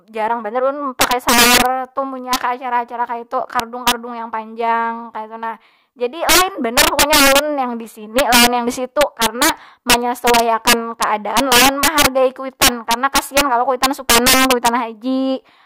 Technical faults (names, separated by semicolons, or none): integer overflow